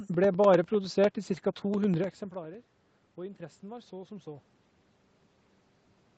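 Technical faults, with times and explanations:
0.14–2.54 s, periodic USB or driver dropouts: roughly every 0.1 s the audio path stalls and a tiny slice of the speech, around 2 ms, is lost and filled with silence, about thirty times in this stretch. Each gap breaks the waveform abruptly, so it is heard as a regular tick that follows the speech and disappears in pauses. A waveform view shows evenly spaced short gaps of silence; a spectrogram shows thin vertical broadband lines at the same 0.1 s spacing.
3.15–4.54 s, automatic gain rising: the level reaching the microphone dropped by about 17 dB, following the talker moving back around 2.0 s, and the automatic gain control responded by slowly raising its gain by about 3 dB over roughly 1.4 s. Because the gain acts on everything, the speech and the room noise swell together rather than the voice alone. On a waveform the envelope creeps upward across this span; on a spectrogram the whole picture, noise floor included, brightens gradually.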